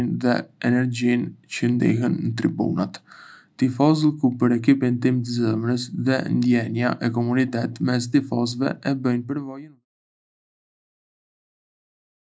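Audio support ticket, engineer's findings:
No faults found in the speech; the fade-out ending at about 9.85 s is smooth and deliberate.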